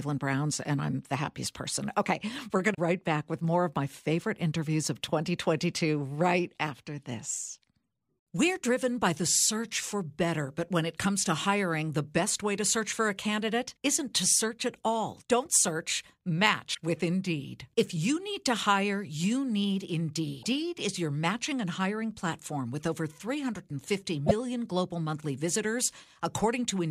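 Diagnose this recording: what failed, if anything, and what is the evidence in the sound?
The codec stage failed, from damaged data in a compressed stream: short glitches at 2.71–2.79 s (before "back with more of"), 16.71–16.78 s, 20.39–20.45 s and 24.23–24.31 s. The decoder misreads corrupt frames, then resyncs at the next frame header.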